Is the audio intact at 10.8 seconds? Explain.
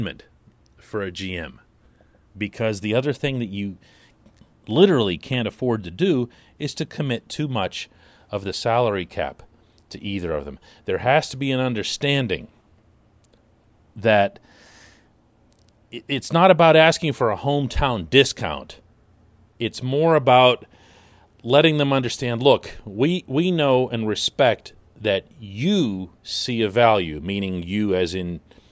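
Yes, the speech at 10.8 seconds plays through cleanly, with no dropout, click, glitch or other fault at that moment.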